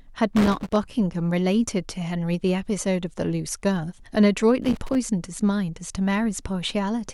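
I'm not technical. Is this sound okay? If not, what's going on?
No. There are two bursts of loose connector crackle in this speech recording. The first runs from 0.36 to 0.76 seconds. The second runs from 4.62 to 4.95 seconds. Each lasts well under half a second. A plug or socket in the audio chain is worn or dirty. When it shifts, the contact keeps breaking and reconnecting. That chops the sound into rough, uneven scratching.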